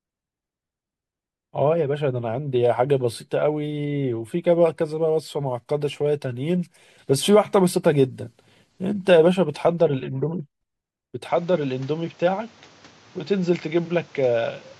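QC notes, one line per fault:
11.28 to 14.8 s, input switched to a poorer device: speech abruptly dulls and quietens, likely a lesser microphone. The spectrogram is cut flat above 7.6 kHz, the waveform shrinks slightly without a gap, and a new noise floor appears.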